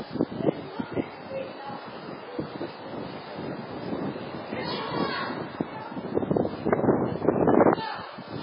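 An everyday-sound recording carrying heavy MP3 compression damage from start to finish: nothing survives above 5.2 kHz, and the remaining band sounds watery and swirly as weak frequency lines drop in and out between frames, with smeared attacks, likely from a very starved bitrate around 16 kbps.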